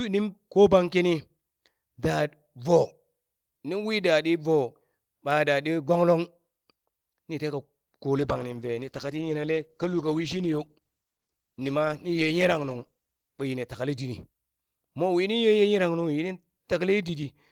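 From 8.18 to 14.35 s a call bitrate drop, fitting roughly 13 kbps, makes the speech watery and muffled. Its added coding roughness distinguishes it from plain filtering.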